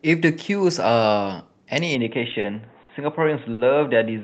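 Short stalls from late packets occur at 2.40–2.45 s, 2.83–2.91 s and 3.53–3.61 s. The jitter buffer ran dry and the receiver held the last sound for 30 ms, then 60 ms and 60 ms, so each time a sound drags with a slight buzz or dip.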